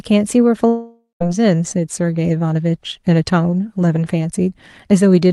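A long network dropout runs from 0.69 to 1.22 s. The speech stops arriving and the receiver stretches the last sound into a fading buzz for most of that half second, leaving about 0.14 s of near silence before the speech returns. Roughly 0.52 s of the speech is never played, so it resumes further along, with that part lost. The likely cause is a stall in packet delivery across the network.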